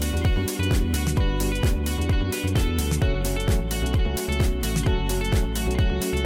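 No technical fault can be heard anywhere in this audio, and the signal holds steady throughout.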